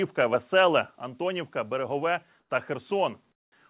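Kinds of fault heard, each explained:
Microphone volume stepped down: At about 1.02 s the whole sound, speech and background together, drops by about 4 dB in one step. This is likely the call software lowering the microphone's input volume after judging it too loud.
Comfort noise in place of the background: In two pauses the real background gives way to steady, featureless noise. This lasts 100 ms at about 2.4 s, about 4 dB quieter. It lasts 200 ms at about 3.32 s, about 18 dB quieter. This likely comes from the receiver filling pauses the sender stopped transmitting.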